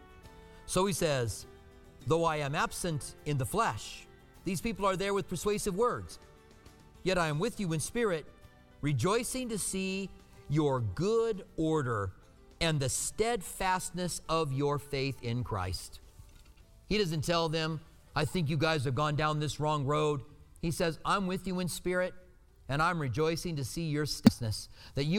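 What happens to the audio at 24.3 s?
Damaged data in the compressed stream, from 24.27 to 24.29 s, makes the decoder misread frames and resync, producing a brief chirp, squawk, click or short hole.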